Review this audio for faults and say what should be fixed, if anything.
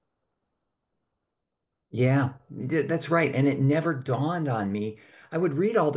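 No faults found; nothing needs fixing.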